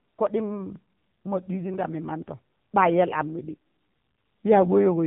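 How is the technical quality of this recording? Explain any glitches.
The technical quality is limited by one fault running through the whole speech clip: the AMR narrowband mobile codec. Nothing above 3.8 kHz survives, and the voice has a plainly audible buzzy, synthetic edge. The codec rebuilds speech from a vocal-tract model excited by sparse pulses every 5 ms, and the coarse texture points to a low mode near 8 kbps. A plain telephone-band filter would sound muffled but still natural. Here the voice itself sounds rebuilt.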